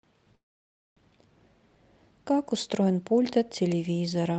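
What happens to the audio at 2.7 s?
Nothing goes wrong at 2.7 s; the speech carries on intact through that moment, with only the steady band-limited character of the call codec that runs through the whole clip.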